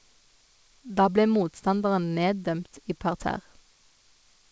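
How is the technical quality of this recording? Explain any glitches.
The technical quality holds up with no glitches to explain, though the recording has the band-limited sound of a wideband call codec, with nothing above 8 kHz.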